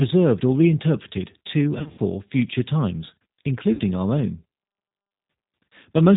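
Throughout the clip the speech carries the sound of the G.729 codec, and the plainly audible damage fits the 8 kbit/s G.729A variant. The codec models each 10 ms frame with a vocal tract filter, a pitch predictor and a few sparse pulses, discarding everything above 4 kHz. The result is band-limited, slightly rough and synthetic-sounding speech, missing the fine detail a waveform codec would keep.

From 1.78 to 2.00 s comes VoIP packet loss concealed by the speech codec. Roughly 140 ms of audio is missing, scattered across about 200 ms, with the longest continuous gap 60 ms. The decoder fills each gap by extending its last pitch and filter state at falling gain, so the speech is stretched into a buzzy tone or coloured noise that fades, and stays degraded briefly after packets resume because each frame builds on the last. A second, shorter loss at 3.73 to 3.80 s removes about 60 ms and produces the same brief fading fill.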